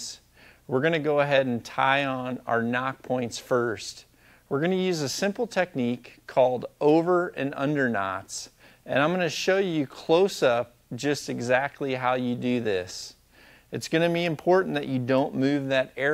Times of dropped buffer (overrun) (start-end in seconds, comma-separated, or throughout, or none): none